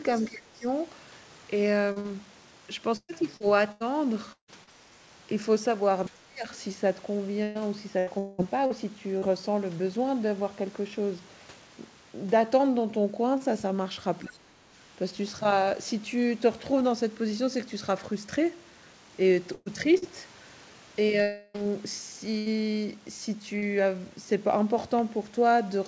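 A speech recording of one side of a call, with echo-control and network faults throughout. From 0.16 to 0.28 s, the other side's voice leaks through. It is a faint second voice, about 25 dB below the talker. The likely cause is a loudspeaker echo that the echo canceller did not fully remove from the microphone. Right after it comes speech suppressed in double talk, from 0.29 to 0.66 s. The talker's level sinks by as much as about 20 dB for roughly 0.4 s. The same suppression returns at 4.91 to 4.97 s, a shallow dip of about 10 dB. It returns again at 6.09 to 6.45 s, the deepest, near 30 dB. The last is at 14.21 to 14.43 s, about 20 dB. Each time, both sides were likely talking at once. The canceller could not separate the talker from the echo, so it turned everything down. Repeated packet loss gives a robotic sound from 1.92 to 4.70 s. About seven holes each get patched by stretching the last sound. 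The longest hole is 156 ms, and about half a second of audio is lost. That leaves choppy speech with pieces gone. A second run from 7.43 to 9.25 s has five holes. The longest is 194 ms, and roughly a quarter of that stretch is synthetic fill. A burst of packet loss at 19.54 to 19.69 s drops about 120 ms. The last sound is held as a fading buzz or hiss, with a brief silence, before speech resumes further on. A shorter burst at 22.38 to 22.49 s removes about 80 ms in the same way. Short concealed packet loss at 19.98 to 20.05 s and at 23.58 to 23.65 s each hides about 40 ms. These sound like quick smears or wobbles that can swallow a consonant. A long network dropout from 21.22 to 21.57 s loses about 320 ms. The fill continues the last sound the whole way, fading rather than falling silent. The likely cause is that no packets arrived during that stretch. Underneath, the call path carries nothing above 8 kHz. 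That fits G.722 at 64 kbps.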